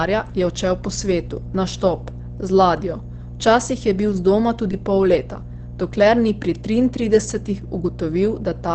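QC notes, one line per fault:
Throughout: mains hum. A steady low tone at 60 Hz sits under the speech at roughly 15 dB below it. It sounds like power-line coupling, most plausibly a ground loop or a transformer close to the signal path, feeding the 60 Hz supply into the audio, with a few weaker low harmonics giving the tone a slightly buzzy edge.
Throughout: Opus compression. The speech is muffled and hoarse, with nothing above 8.6 kHz, so sibilants and breath detail are dulled. This is plainly audible codec damage, likely from Opus running in its SILK speech mode at wideband bandwidth. That behaviour points to a low bitrate around 16 kbps, where the encoder models the voice rather than preserving full spectral detail, which produces the hoarse, band-limited quality.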